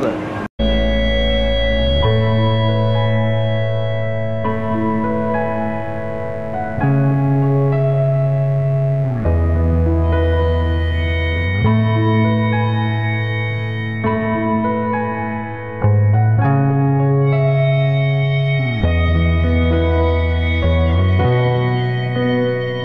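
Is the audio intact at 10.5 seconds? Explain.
No, mains buzz runs from 4.49 to 11.46 s: switching spikes twice per 50 Hz cycle add harmonics into the kilohertz range, a steady, raspy buzz roughly 20 dB below the sound.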